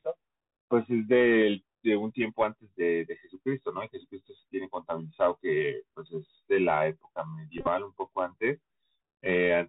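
Throughout, the speech sounds muffled and narrow, with nothing above 4 kHz, scratchy s sounds, distortion on loud high sounds and a granular hiss underneath. This is the Bluetooth CVSD headset codec, whose 64 kHz one-bit up-or-down steps adapt too slowly to follow sharp changes.

From 7.58 to 7.68 s, the speech breaks into short bursts of buzz near 267 Hz, the longest lasting around 30 ms. These are Bluetooth headset packet repeats: about 60 ms of voice, scattered over 90 ms, went missing. The chip replayed the previous 3.75 ms packet each time, which fits roughly sixteen lost packets.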